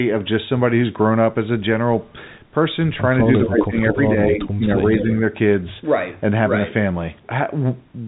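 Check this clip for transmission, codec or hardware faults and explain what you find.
Two faults show up, both packed between about 3.3 and 5.0 seconds of this speech clip: an echo leak and speech suppressed in double talk.

Echo leak appears at 3.32–3.42, 3.92–4.03, 4.41–4.49 and 4.89–5.04 s. Short, faint repeats of speech trail the original by 213 ms. They sit roughly 10 to 15 dB below the main voice. The likely cause is a far-end loudspeaker feeding its microphone, with that side's echo canceller letting part of it through.

Speech suppressed in double talk occurs at 3.46–3.76, 3.94–3.99, 4.31–4.39 and 4.55–4.84 s. The voice dips sharply, by up to about 20 dB in the first and last spans and less in the two short ones. These dips fall among the echo bursts, where both sides overlap. The likely cause is the echo canceller failing to separate the talker from the returning echo and turning everything down. 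The result is a choppy, fading voice.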